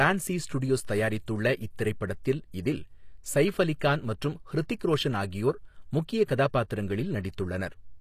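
From start to end, the speech carries HE-AAC compression damage that is plainly audible. The treble sounds synthetic. It was likely rebuilt from copied lower bands, which fits a low bitrate near 24 kbps. S sounds turn gritty and lispy. Nothing remains above 14.9 kHz.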